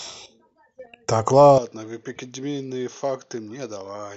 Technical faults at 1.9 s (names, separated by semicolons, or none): input switched to a poorer device